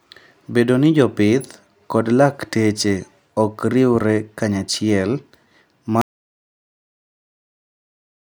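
At 6.01 s the speech cuts off mid-flow. An audio dropout to silence follows and runs to the end, about 2.25 s. No room tone remains, only silence. The input was likely lost while recording continued.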